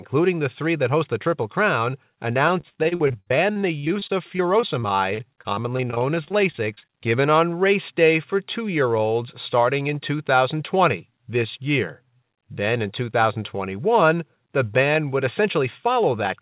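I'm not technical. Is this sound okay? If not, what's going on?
No. Between 2.48 and 6.94 s there is repeated packet loss (robotic sound): dozens of small chunks of the call audio went missing or arrived late, the longest about 61 ms. Each hole was patched by stretching the last bit of sound, so the speech turns choppy, with pieces missing.

From 10.74 to 11.12 s there is a jitter buffer speed-up: the receiver had stored up too much audio and quietly trimmed tiny slivers, a few hundredths of a second in all. The speech there plays about 7% faster, sounding rushed without changing pitch.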